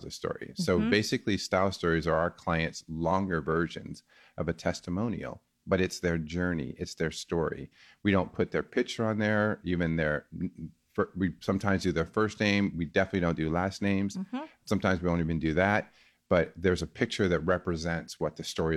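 No technical faults can be heard anywhere in the recording. There is nothing in the speech that calls for a fault description.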